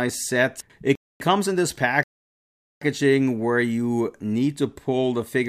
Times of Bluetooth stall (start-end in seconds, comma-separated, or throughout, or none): 0.95-1.21